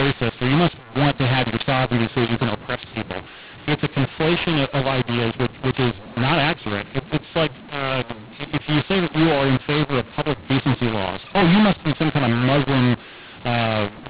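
Throughout, mu-law and A-law are mixed up: mu-law speech is decoded as A-law, scrambling levels, so it sounds harsh and distorted and pauses fill with noise.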